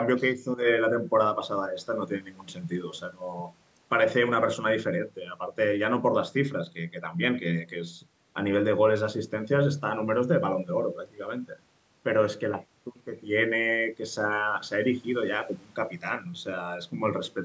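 Nothing stood out on listening to this speech, which carries the ordinary trimmed low bass and nothing above 8 kHz that come from a call's microphone processing.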